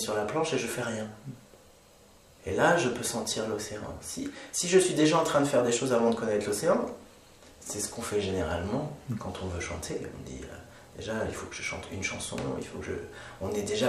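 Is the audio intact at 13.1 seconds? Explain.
Yes, at 13.1 seconds the audio is intact, with no dropout, glitch or other fault to be heard at that moment.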